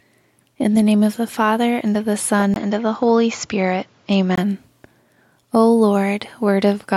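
The recording input was likely switched to a poorer device at 2.54 s, and the original path returns at 4.38 s. The switch leaves a brief gap of about 20 ms. For those 1.8 seconds the band stops near 7.2 kHz, so the speech turns duller and loses its airy top, while a faint new background noise appears, about 35 dB below the speech. The loudness stays roughly the same throughout.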